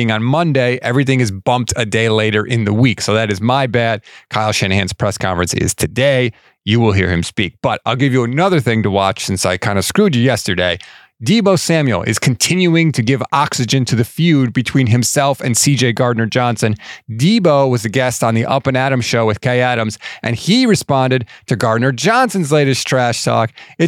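From 22.6 s to the end of the clip at 23.9 s, the speech picks up sample clock jitter. The converter's clock wanders by roughly half a microsecond, so each sample lands slightly off its intended instant. The resulting error is proportional to how fast the waveform is changing, and here it sits around 45 dB below the signal. It is audible as a faint hiss and graininess that rides on the louder, brighter parts of the speech and drops away in the pauses.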